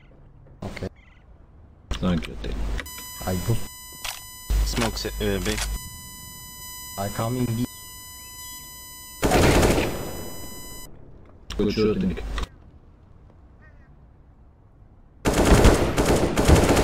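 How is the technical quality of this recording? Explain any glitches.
The recording has one clear fault: USB whine from 2.86 s to 10.86 s. Current pulses from the USB bus's 1 ms frames leak into the audio, giving a steady 1 kHz whine with its loudest component at 8 kHz, about 20 dB below the sound. Its fixed kilohertz pitch sets it apart from low mains hum.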